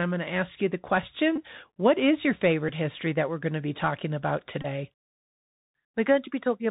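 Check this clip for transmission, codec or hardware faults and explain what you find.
Two faults are present: a Bluetooth headset codec throughout, and brief packet repeats at three points.

The Bluetooth CVSD headset codec runs for the whole clip. Its one-bit slope coding, which fits a 64 kbps link, cuts everything above 4 kHz and leaves granular hiss and scratchy s sounds. Unlike plain low-pass filtering, loud high sounds distort because they outrun the adapting step.

The Bluetooth headset packet repeat occurs at 1.36 s after "to ask you the", at 2.69 s after "is your" and before "history that we're going", and from 4.62 to 4.66 s after "to be talking about". Lost packets were replaced by replaying the previous packet's bits. The first two last about 15 ms and 7.5 ms. The last runs about 22.5 ms and buzzes near 267 Hz. That periodic buzz, from packets repeating every 3.75 ms, distinguishes it from a plain dropout or click.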